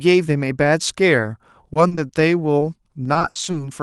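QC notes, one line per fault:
1.21–1.25 s and 2.59–2.63 s: short concealed packet loss. In each spot about 20 ms of audio arrived too late for the Opus decoder. The receiver extended the preceding sound to cover it, then crossfaded back, leaving a brief smear or wobble in the speech.
1.73–2.11 s and 3.03–3.55 s: repeated packet loss (robotic sound). In the first span, four gaps totalling 100 ms (longest 40 ms) are patched, covering about 26% of it. In the second, seven gaps totalling 180 ms (longest 60 ms) cover about 35%. The back-to-back concealment makes the speech choppy.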